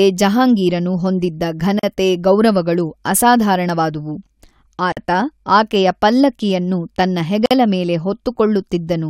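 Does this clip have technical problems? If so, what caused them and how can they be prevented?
Yes. The speech drops into brief silences at 1.79–1.83 s (40 ms), 4.92–4.97 s (48 ms) and 7.46–7.51 s (50 ms), with smeared edges before it resumes where it stopped. These are gaps at a join of encoded pieces: separately encoded segments were butted together with each encoder's start-up delay and final-frame padding left in. To prevent this, encode the audio as one continuous stream, or trim encoder delay and padding using gapless metadata before joining.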